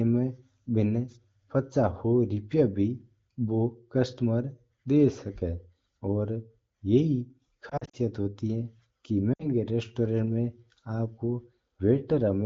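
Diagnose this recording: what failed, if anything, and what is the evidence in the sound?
Network stage, radio side: lost AMR speech frames. From 7.70 to 7.97 s the speech briefly warbles and dips in scattered bursts, none longer than 40 ms, then again from 9.33 to 9.49 s. The decoder papered over each gap by repeating the last good pitch and vocal tract settings with falling gain.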